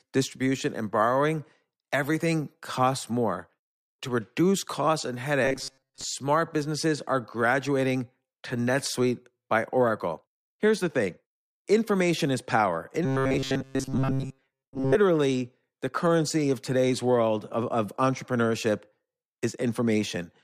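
From 5.45 to 6.04 s and again from 13.05 to 14.95 s, the speech turns into a rigid metallic buzz at 134 Hz: robotic sound from repeated short buffers, likely a roughly 7.5 ms chunk looped for most of each stretch. A spectrogram shows evenly spaced 134 Hz harmonic stripes.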